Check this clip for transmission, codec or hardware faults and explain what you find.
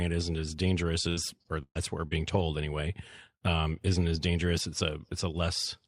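The clip has one transmission fault: repeated packet loss (robotic sound) from 1.09 s to 2.41 s, starting just after "isn't as dangerous" and ending before "anyway um isn't as". Over that 1.3-second stretch there are four gaps, the longest 125 ms, totalling about 260 ms of lost audio. Each gap is patched by extending the preceding sound, concealing roughly a fifth of the span. Those stretched fills make the speech choppy, with pieces audibly missing.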